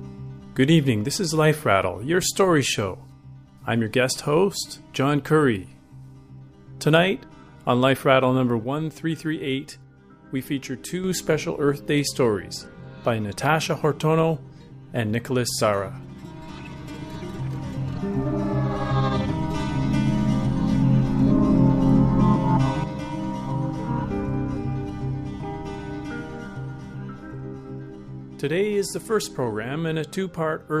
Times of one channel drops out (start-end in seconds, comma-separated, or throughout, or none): 8.64-11.04, 22.84-30.80